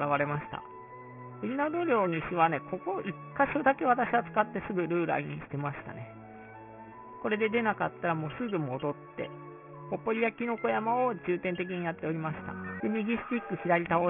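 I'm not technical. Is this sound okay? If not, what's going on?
No. The fault here is aliasing, and it runs through the whole clip. The audio was converted to a much lower quality setting, which fits a drop to about 6 kHz, without first removing the high-pitched parts it could no longer hold. Those parts folded back down below 3 kHz as wrong, unrelated pitches. You hear a gritty, metallic edge on hissy and bright sounds, quieter than the main sound.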